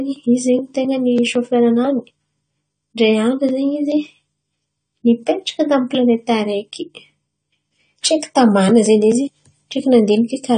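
From start to finish the speech has plainly audible coding damage, likely AAC compression of the AAC-LC kind. Nothing is present above 9 kHz, so the top octave is simply gone and the sound is dull. The encoder has discarded spectral detail to fit its budget, which fits a low bitrate of around 32 kbps. Sibilants and held sounds come out smeared, with a warbling, fizzy texture where bands were coarsely quantised.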